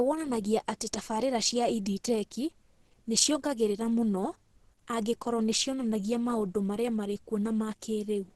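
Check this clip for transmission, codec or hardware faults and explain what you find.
One fault, and it runs the whole clip: Opus compression, likely in its hybrid speech mode. Nothing survives above 12.1 kHz, and heavy coding damage leaves the speech muffled and hoarse, grainy in texture, which points to a very low bitrate around 12 kbps.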